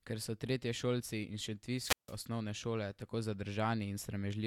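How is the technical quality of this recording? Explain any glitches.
There's one glitch in this speech recording. From 1.76 to 2.18 s there's a wireless microphone squelch dropout. The radio signal fades, hiss rises briefly, the receiver's squelch mutes the output for 158 ms, and then the voice comes back.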